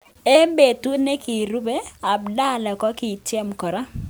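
Speech with grainy, signal-following distortion throughout, roughest on quiet passages; low bit depth without dither is the likely cause, consistent with 9-bit rounding, error roughly 40 dB down.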